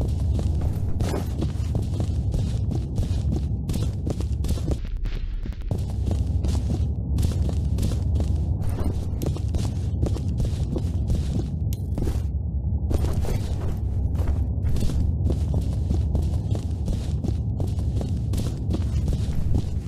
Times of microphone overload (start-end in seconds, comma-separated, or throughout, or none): none